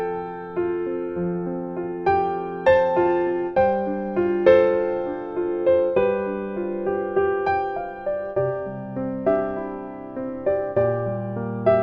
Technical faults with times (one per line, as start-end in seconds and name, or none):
2.73-5.33 Bluetooth SBC bit pool drop
8.25-11.06 Bluetooth SBC bit pool drop